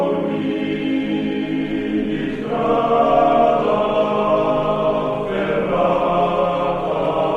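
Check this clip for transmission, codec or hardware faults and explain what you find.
Nothing stood out on listening to the clip.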